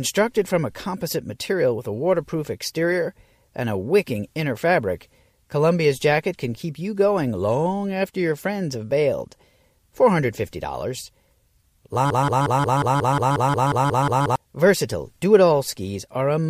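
At 12.10 s the speech catches in a broken-record loop: a 180 ms fragment repeats back to back until 14.36 s, likely a stalled player resending its last buffer.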